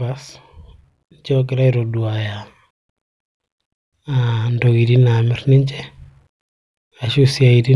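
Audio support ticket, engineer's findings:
No faults found on listening; the speech recording shows no dropouts, distortion, timing errors or other playback defects attributable to any component in the chain.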